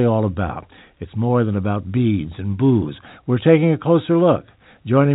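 No technical faults can be heard in this recording.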